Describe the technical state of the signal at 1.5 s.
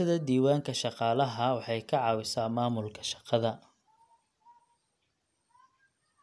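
At 1.5 s the speech signal is intact, with no dropout, distortion, clipping or other technical fault audible at that point.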